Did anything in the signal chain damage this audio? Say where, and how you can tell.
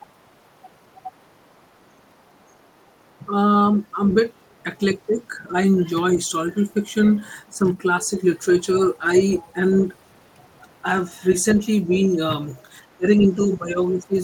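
Yes. Call processing: the other side's voice leaking through at 1.22–2.48, 4.07–5.15, 7.05–7.11, 8.73–9.86 and 11.3–14.21 s, faint at first, later only about 20 dB down. It is likely residual loudspeaker echo the canceller missed. A second voice, unlike room reverb, doesn't trail the talker.

Speech suppressed in double talk: the talker dips slightly during 5.48–6.18 s and drops about 15 dB during 12.97–14.16 s. The dips likely come from the echo canceller turning this talker down while the far side played, which sets this apart from a level fault.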